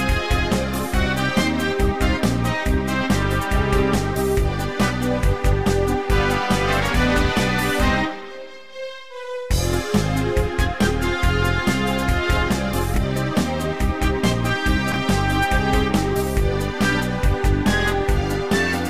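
At 12.94 s and again at 14.92 s, each time over about 40 ms, the audio has chunks out of order. A 20 ms chunk was written one slot late, so it plays after the chunk that should follow it. Nothing goes missing, but each swap leaves three hard joins, heard as a brief garbled stutter. On a waveform the joins show as abrupt discontinuities. On a spectrogram they appear as thin vertical broadband lines where the signal jumps between out-of-sequence segments.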